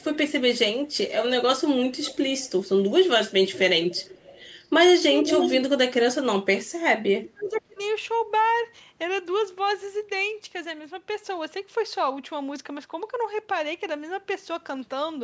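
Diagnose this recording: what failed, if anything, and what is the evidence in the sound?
Echo leak, in call processing. A delayed copy of the speech trails it at 0–0.18, 0.56–1.33, 1.8–2.93, 3.47–4.68, 5.24–5.61 and 7.23–7.6 s. The lag is about 0.48 s and drifts slightly later. The copy is usually well below the speech, but near equal at 5.24 s. The likely cause is a far-end echo canceller that missed loudspeaker pickup.

Speech suppressed in double talk, also in call processing. From 7.31 to 7.8 s, while the echo overlaps, the speech dips hard, by up to about 30 dB, across roughly 0.4 s. The likely cause is an echo canceller that could not separate talker from echo and attenuated both.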